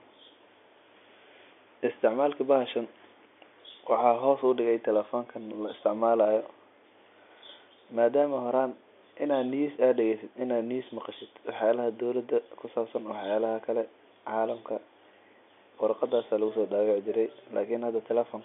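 No technical faults are audible anywhere in the speech.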